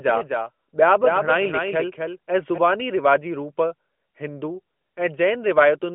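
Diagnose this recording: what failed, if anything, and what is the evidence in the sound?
The failure is a doubled audio track, present from the very start and running to 2.58 s, where it cuts off abruptly just before "रिवाजी रूप". A second full-band copy of the speech trails the original by roughly a third of a second, sitting about 5 dB lower. It has no decay or room sound, so it isn't a reflection. The likely cause is an editing or storage stage holding two misaligned copies, or a second, slower capture path mixed back in. Both copies pass through the same narrowband mobile line, with nothing above 3.5 kHz.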